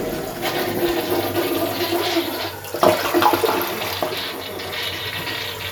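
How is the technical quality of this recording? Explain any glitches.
No glitches can be heard anywhere in this recording.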